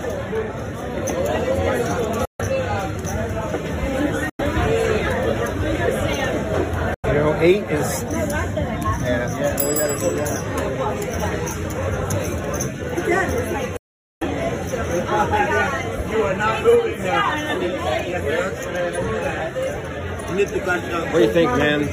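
At 2.25 to 2.41 s, 4.29 to 4.41 s, 6.94 to 7.06 s and 13.77 to 14.23 s the sound cuts to silence and then returns, a pattern that points to a likely Bluetooth dropout, with packets missing the headphones' deadline. The longest hole, near 0.44 s, fits about 19 lost frames. Unlike a stutter or a freeze, nothing repeats or stretches: the gap is clean, and playback resumes further along, as though it had kept running unheard.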